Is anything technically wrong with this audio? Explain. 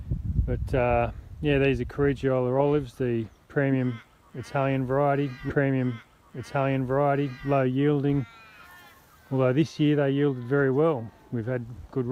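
Yes. A stream segment repeated from 5.49 to 7.49 s: the player queued the same segment twice, so two seconds replay after a small blip at the jump.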